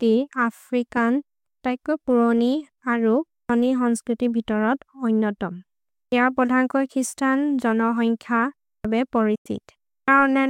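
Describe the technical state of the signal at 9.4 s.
At 9.4 s the signal is in a digital broadcast dropout. It runs from 9.35 to 9.46 s. The receiver stopped getting usable frames and muted its output until good ones returned. The speech fades out over about 8 ms, then there is a hole of silence. About 96 ms of programme is simply gone, which fits roughly three lost frames. The sound then returns, with the missing part never recovered.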